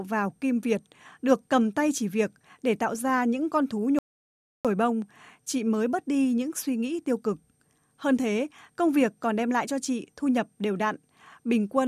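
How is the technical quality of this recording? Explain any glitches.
The recording has one clear glitch, a playback stall in the speech at 3.99 s. Right after "ra những con thú", the sound cuts out completely for about 0.66 s and resumes at 4.65 s with "bông chị mới bớt". The likely cause is the player running out of buffered data, or its thread being blocked, so output went silent until it recovered. On a waveform it shows as a flat line and on a spectrogram as a blank vertical band, both edges abrupt.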